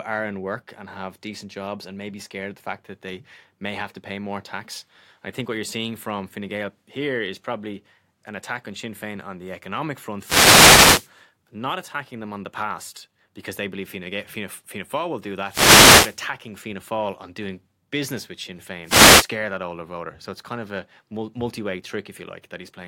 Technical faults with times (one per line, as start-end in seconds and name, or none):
10.18-11.10 wireless microphone noise hit
15.46-16.19 wireless microphone noise hit
18.83-19.30 wireless microphone noise hit